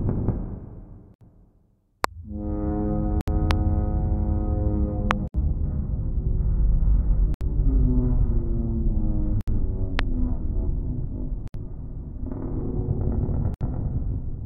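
A recording of everyday sound has two faults. The first is a gap at a join of encoded pieces. Silences of about 67 ms open at 1.14, 3.21, 5.28, 7.34, 9.41, 11.48 and 13.54 s, each with smeared edges. Separately encoded pieces were joined without trimming each run's leading delay and padded last frame. Unlike a random dropout, these gaps repeat every 2.0 s with the same length, and the sound resumes exactly where it stopped rather than skipping ahead. The second fault is a loud pop, a single sharp pulse at 2.04–2.06, 3.51–3.53, 5.11–5.13 and 9.99–10.01 s. It peaks roughly 20 to 25 dB above the surrounding sound. The likely cause is a voltage step from a plug, switch, static or driver glitch. These pops come at irregular times and sit on top of continuing sound, which distinguishes them from the gaps and from clipping.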